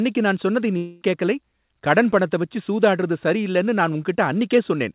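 From 0.77 to 1.04 s, between "நான் சொன்னதை" and "கேக்கலை கடன் பணத்த வச்சு", the speech turns into a fading buzz, likely a long network dropout. About 240 ms never arrived; the receiver stretched the last sound across the gap, and speech resumes without the lost part.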